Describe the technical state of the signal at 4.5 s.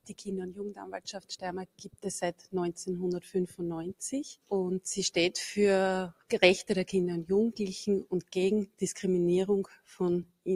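At 4.5 s the signal is under a noise suppressor applied to music or sounds, a fault present for the whole clip rather than one starting at that moment. A suppressor designed for speech treats sustained tones, ambience and reverberant tails as noise and pulls them down, while transients pass largely intact. The gain swings by roughly 10 dB as a result, so held material and decays sink and recover, giving an audible pumping, fluttering, thinned character.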